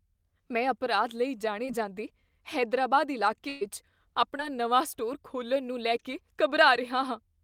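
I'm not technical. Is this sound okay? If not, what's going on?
No. The clip is speech with three brief dropouts, where pieces of the call arrived too late and the receiver had to patch over them.

Two are short concealed packet losses: one at 1.65 s, right after "ਮੈਂ ਅਪਰਾਧ ਲਈ", and one at 4.37 s, just before "ਨਵਾਂ ਸਟੋਰ ਖੋਲ੍ਹਣ ਨੂੰ". In each, about 20 ms of audio went missing, and the receiver filled it by continuing the sound it had just played before blending back into the real audio. You hear a quick smear or wobble, and a very short sound at that point can disappear.

The third is a burst of packet loss from 3.49 to 3.63 s, after "ਜਾਂਦੇ ਹੈਦਰਾਬਾਦ". Here about 120 ms was lost in one go. Rather than leave a silent gap, the receiver stretched out the last sound and let it fade, so you hear a held buzz or hiss. When the audio comes back, it picks up further along, and the piece that should have been in between is simply gone.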